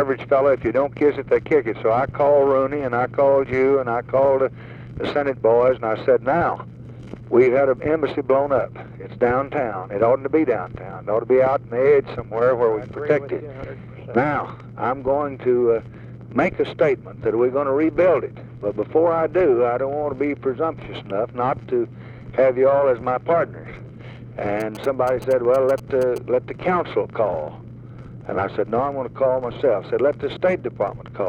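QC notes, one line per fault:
24.60–26.18 s, GSM signalling bursts. A galloping dit-dit-dit of short buzzes at about 217 Hz sits roughly 15 dB under the sound. A nearby 2G phone is signalling, and the audio circuit rectifies its radio bursts into audible clicks.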